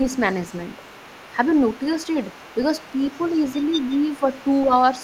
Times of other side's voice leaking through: 0.06-5.03

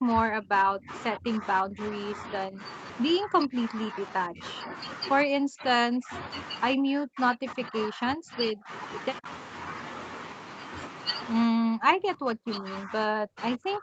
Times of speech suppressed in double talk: 0.00-1.81, 2.47-2.62, 3.18-3.96, 4.28-4.73, 5.25-6.12, 6.76-8.70, 9.19-9.26, 11.44-13.82

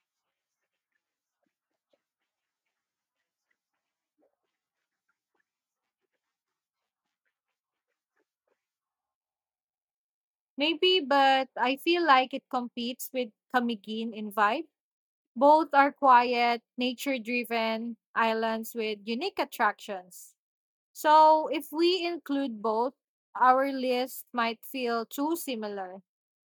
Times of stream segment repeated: none

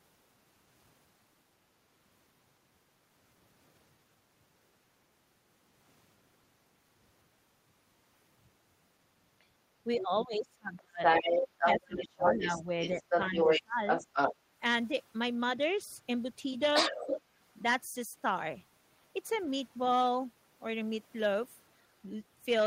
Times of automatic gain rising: none

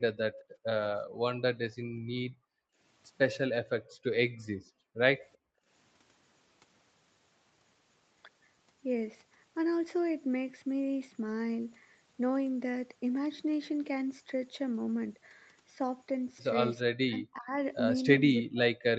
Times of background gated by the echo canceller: 0.32-0.66, 1.06-1.25, 1.76-2.78, 3.81-4.03, 4.37-4.98, 5.36-5.67

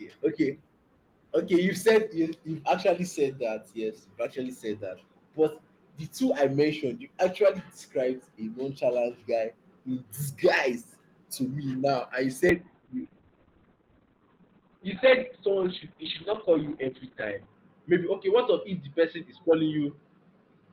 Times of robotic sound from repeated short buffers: none

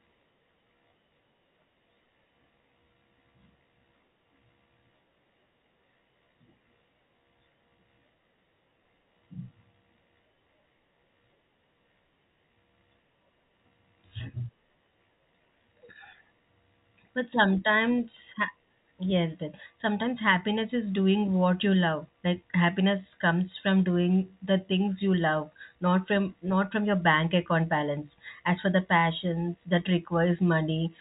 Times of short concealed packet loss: none

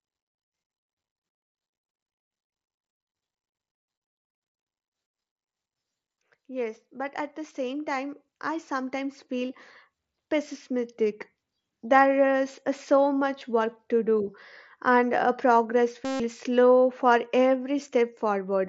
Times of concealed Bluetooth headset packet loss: 13.39, 16.05-16.20

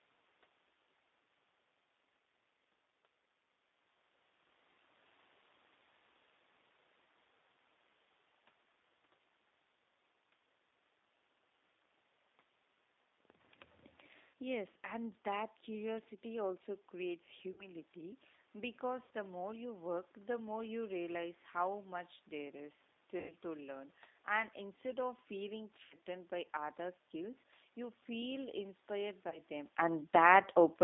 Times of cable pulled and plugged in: none

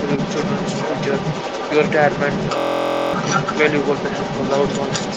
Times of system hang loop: 2.58-3.13

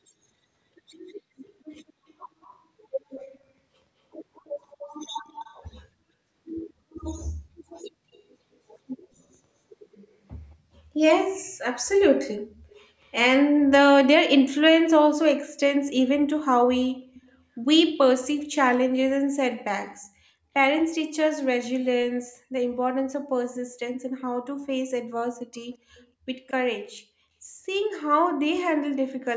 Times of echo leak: 1.45-13.09, 17.14-17.38, 25.72-26.52

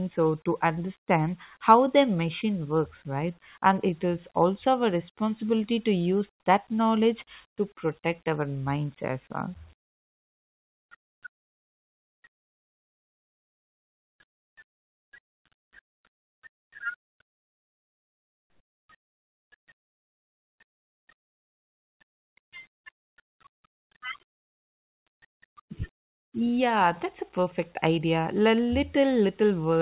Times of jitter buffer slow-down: none

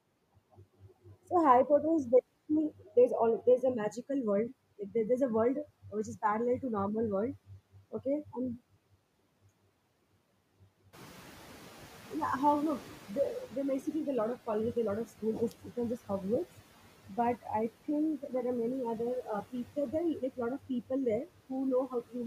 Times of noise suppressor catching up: 10.93-13.91

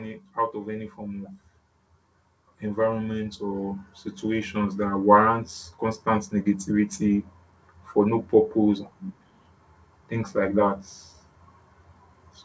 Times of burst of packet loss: none

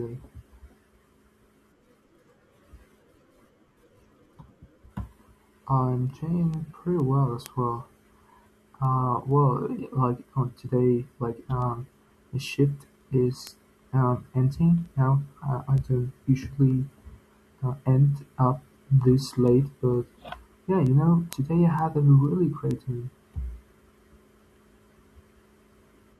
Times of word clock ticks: 0.53-25.95

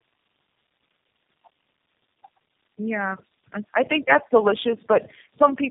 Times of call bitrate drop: none

